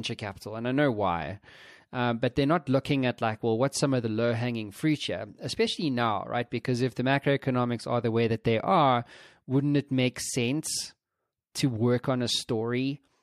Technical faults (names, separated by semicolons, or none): none